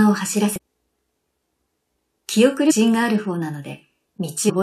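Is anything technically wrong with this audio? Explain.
Yes, there is damaged data in a compressed stream, heard at 0.56–0.58 s, 2.70–2.72 s and 4.48–4.50 s. At each point a stretch of the encoded bytes arrived corrupted, so the decoder misread or discarded those frames, lost its place and had to hunt for the next valid frame header before decoding could resume. Each break is roughly 20 ms long and comes out as a brief chirp or blip cutting through the sound.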